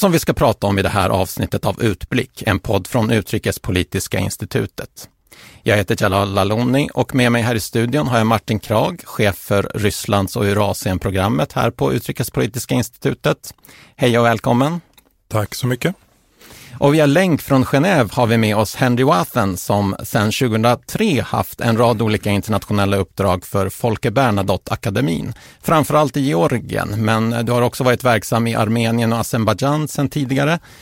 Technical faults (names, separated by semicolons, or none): none